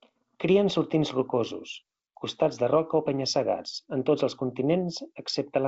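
Listening to this speech recording, carried over G.722 wideband telephone coding at 64 kbit/s, nothing stood out as a technical problem.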